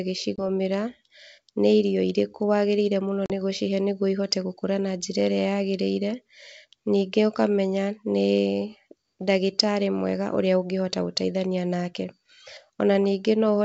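At 0.36 to 0.47 s there's packet loss on an ADPCM call: about 20 ms goes missing, roughly one packet, and drops out as a hard-edged silent gap. When the speech picks up again, the decoder's predictor and step size no longer match the sender's, so it comes back a bit rough. It happens again at 3.26 to 3.31 s, with 40 ms lost, about two packets, right before "nĩ gũcihe nĩguo ihote". The G.722 coding underneath is at 64 kbit/s.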